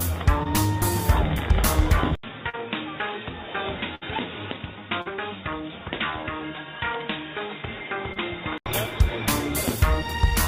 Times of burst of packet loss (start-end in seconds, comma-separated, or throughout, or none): 3.95-4.03